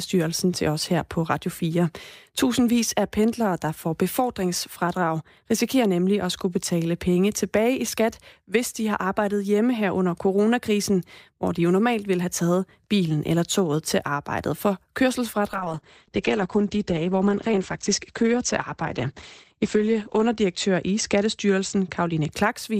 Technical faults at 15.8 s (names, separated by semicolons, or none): call bitrate drop